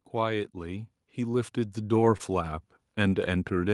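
From 0.05 s to 2.72 s an automatic gain rising effect lifts the level by about 6 dB as the gain control judges the input too quiet. Speech and background swell together, and the waveform envelope widens steadily while the spectrogram brightens evenly across all frequencies. At 2.17 to 2.22 s and again at 3.10 to 3.14 s, short concealed packet loss leaves roughly 20 ms gaps that the receiver fills by extending the preceding sound. Each gap is heard as a brief smear or wobble. On a spectrogram it shows as a smooth, repeated or blurred slice before normal detail resumes.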